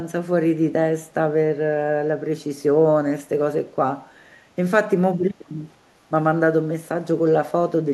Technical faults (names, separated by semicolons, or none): clock slip clicks; echo leak